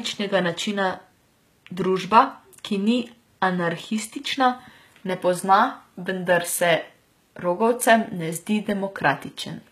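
Throughout the speech, the treble sounds gritty and lispy on s sounds, likely from HE-AAC compression rebuilding the highs by copying lower bands upward, which fits a bitrate near 20 kbps.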